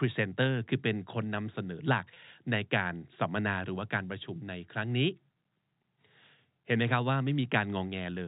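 At 2.14 s, lasting until about 2.16 s, there is packet loss with pitch repetition. A 20 ms stretch of the speech never arrived, which fits a single lost packet. The receiver covered the hole by repeating the most recent pitch period, so the voice briefly holds on one slightly buzzy, static tone before normal speech resumes. The gap is short enough that the repeated cycle doesn't fade to silence. The band-limited G.711 telephone coding is present throughout.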